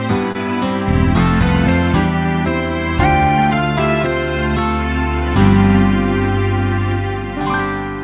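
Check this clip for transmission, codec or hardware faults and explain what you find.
One transmission fault is present: a short concealed packet loss at 0.32 to 0.36 s. About 20 ms of audio never arrived, and the receiver bridged roughly 24 ms by extending the preceding sound, then crossfaded back, leaving a brief smear or wobble. The telephone-band call path, with nothing above 4 kHz, fits G.711 A-law coding.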